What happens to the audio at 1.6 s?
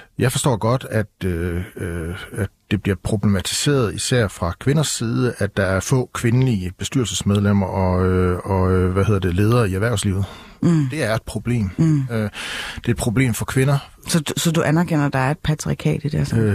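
Nothing goes wrong at 1.6 s; the speech runs through that moment intact, with no dropout, click or distortion.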